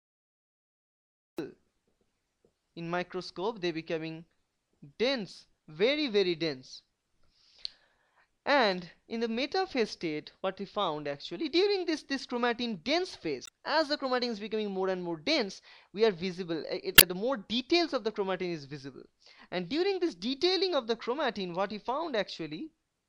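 The recording or stream began late, a cut-off start: digital silence runs to 1.38 s, then the audio enters abruptly mid-sound with no natural attack. Damaged data in the compressed stream made the decoder misread frames and lose sync, producing brief glitches at 13.44 to 13.49 s and 16.94 to 17.03 s.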